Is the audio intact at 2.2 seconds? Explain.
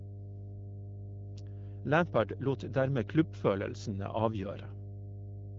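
No. At 2.2 seconds the speech carries mains hum, present for the whole clip rather than at that moment alone. Power-line current has leaked into the signal path, most likely through a ground loop or a nearby transformer, adding a steady 50 Hz tone with a few low harmonics. It sits only roughly 10 dB below the speech, so it is a prominent drone under the voice. The wideband voice coding, with nothing above about 7.5 kHz, does not affect the hum.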